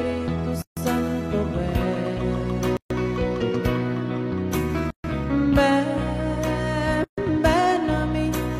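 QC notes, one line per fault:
0.62 to 7.18 s, gap at a join of encoded pieces: the sound drops out four times, at 0.62 to 0.77 s (about 148 ms), 2.77 to 2.90 s, 4.90 to 5.04 s and 7.04 to 7.18 s (about 136 ms each), then resumes where it left off. The audio was encoded as separate 2 s pieces and joined untrimmed, so each encoder's start-up delay and final-frame padding remain as silence, with edges softened by the codec.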